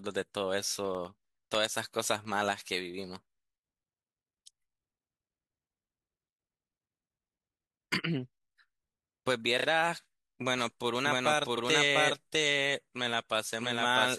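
From 0.75 to 2.55 s, regular ticks sound every 0.1 s, about twenty in all, each a tiny gap of around half a millisecond filled with silence. These are periodic USB or driver dropouts: something blocks the audio path at a fixed interval and a sliver of signal is lost each time.

At 9.59 to 9.66 s a short stutter is repeated frames. A run of about 32 ms of compressed audio is played two extra times, adding 63.9 ms to the clip, which points to frames written or sent more than once.

From 10.58 s to the end, an echo-like second copy of the speech trails about 0.7 s behind at roughly the same level. It is dry, full-band and starts abruptly. This is a doubled audio track, likely from the same audio being captured again through a slower path.

At 11.56 to 11.61 s repeated frames recur. A 46.4 ms stretch plays once more, adding 46.4 ms, and is heard as a brief hiccup.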